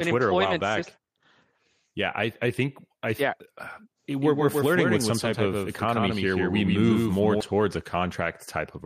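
From 4.21 s to 7.41 s the speech carries a doubled audio track: a second, full-band copy trails the original by roughly 150 ms, about 5 dB quieter. The likely cause is the same signal reaching the mix twice, once through a slower path. It sounds like a hard, dry slapback with no reverberant tail, switching on and off abruptly. On a spectrogram every feature is repeated, slightly fainter, a fixed distance later; the waveform shows matching stacked envelopes.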